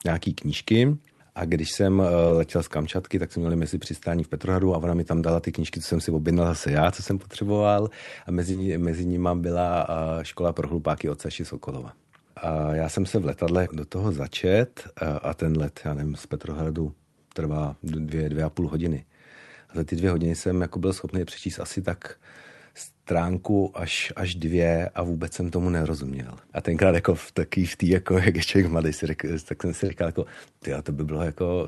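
Short concealed packet loss occurs at 2.27, 5.19, 8.51 (just before "ní mezi nimi byla"), 13.45 (between "já jsem se v" and "do toho začet eh"), 18.05 (before "dvě a půl hodiny") and 29.85 s. Each time, 20 ms of audio (40 ms at 8.51 and 29.85 s) failed to arrive, and the call decoder, running through an Opus call path with audio up to 12 kHz, filled the gap by extending the preceding sound. The result is a brief smear or wobble rather than silence or a sharp click, which is what separates it from a plain dropout.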